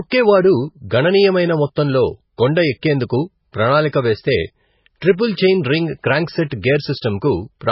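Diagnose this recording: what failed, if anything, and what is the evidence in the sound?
The codec stage has failed, most likely from MP3 compression at a very low bitrate, consistent with roughly 16 kbps. Throughout the speech the treble stops dead at 5.6 kHz, and the damage is heavy: s sounds turn swirly and metallic, and attacks smear. A spectrogram would show a hard ceiling at 5.6 kHz with patchy, flickering blocks below it, as starved frequency lines drop in and out from frame to frame.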